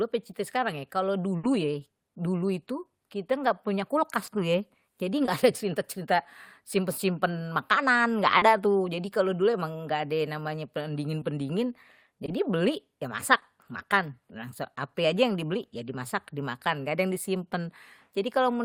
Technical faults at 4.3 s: short concealed packet loss

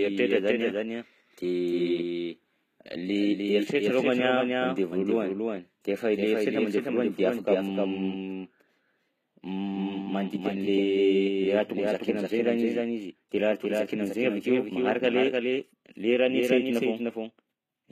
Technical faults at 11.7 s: doubled audio track; HE-AAC compression

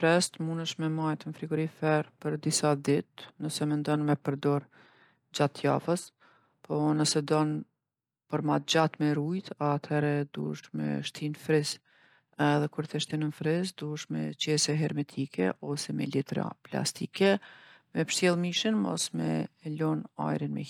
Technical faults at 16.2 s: none

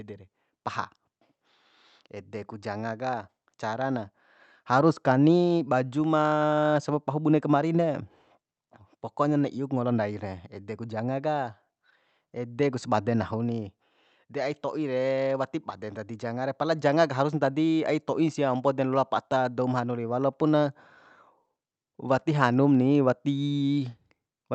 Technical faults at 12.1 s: none

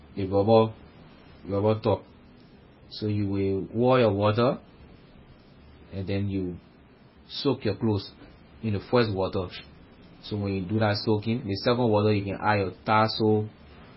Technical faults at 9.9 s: MP3 compression

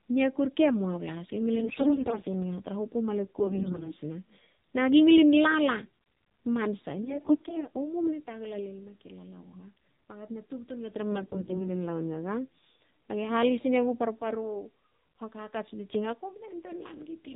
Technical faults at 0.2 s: AMR narrowband mobile codec

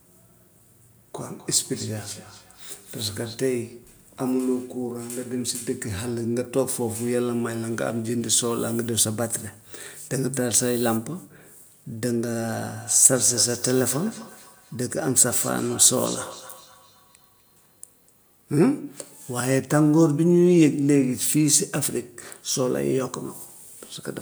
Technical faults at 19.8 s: none

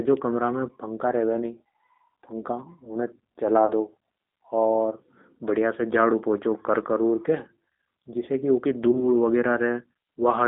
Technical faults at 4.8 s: G.729 codec

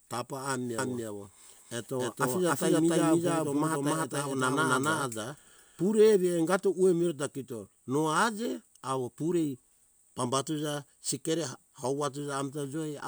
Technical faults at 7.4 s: none

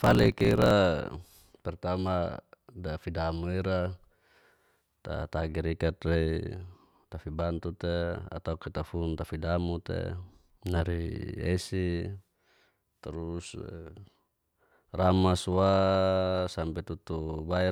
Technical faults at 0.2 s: block size mismatch (truncated)

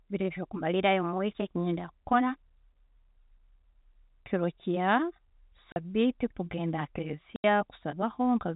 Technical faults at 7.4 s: packet loss filled with silence

